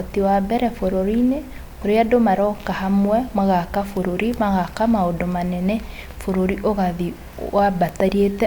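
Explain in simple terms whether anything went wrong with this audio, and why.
Nothing went wrong here: the signal stays steady and intact the whole way through, with no technical faults to be heard anywhere in it.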